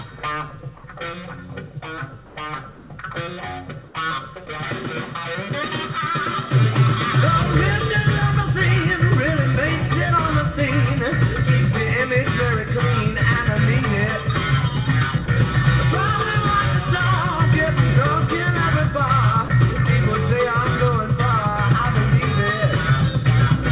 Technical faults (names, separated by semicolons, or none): comfort noise in place of the background; sound dropped by the voice detector